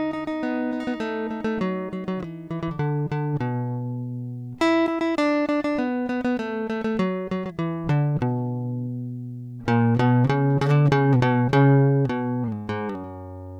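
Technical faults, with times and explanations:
No technical faults, with times and explanations, are present in this music.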